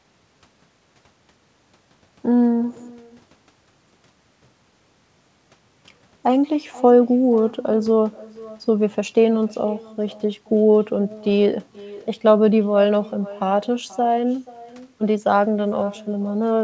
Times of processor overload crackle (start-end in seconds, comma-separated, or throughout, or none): none